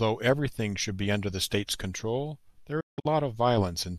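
At 2.80 s the speech hits a digital broadcast dropout lasting until 3.06 s. The receiver lost good frames and muted, fading out over about 8 ms. The holes are scattered, the longest 168 ms, with 216 ms lost altogether. That speech is gone.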